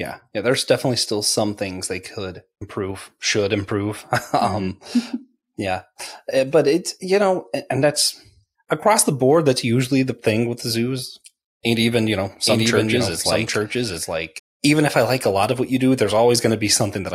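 From 12.5 to 14.4 s a doubled audio track appears: an equally loud, dry copy trails by about 0.7 s, likely a second capture path or misaligned edit.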